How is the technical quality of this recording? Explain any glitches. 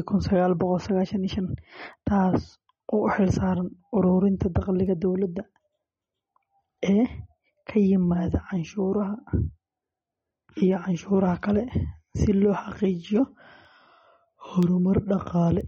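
Not great, honestly. There are two clear problems: a band-limited, smeary speech sound across the whole clip, and a steady run of little ticks on top.

From start to finish the speech sounds watery and swirly, with the plainly audible damage of MP3 compression, likely from a low bitrate around 32 kbps. Nothing comes through above 8.3 kHz, so the encoder has chopped off the treble outright. With so few bits to go round, weak frequency lines drop in and out between frames. That gives the watery texture, metallic edges on s sounds, and softened consonant attacks.

Then there are word clock ticks, starting at 0.96 s and running to 15.61 s, about one a second, roughly fifteen in all. They're short, sharp clicks at a steady pace. That points to a digital link where the receiver runs on its own clock, about 20 ppm off from the sender's. Each time the two clocks slip past each other, a single sample gets dropped or doubled, and that slip is the tick.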